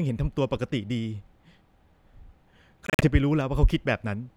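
Between 2.87 s and 3.08 s the speech breaks up into a cluster of short silent gaps with abrupt or briefly faded edges, totalling about 107 ms of missing audio spread over roughly 150 ms, the longest single gap about 46 ms. After each gap the speech picks up further along rather than where it stopped. This is a Bluetooth dropout, likely caused by packets arriving too late at the headphones and being discarded, which fits around seven lost packets.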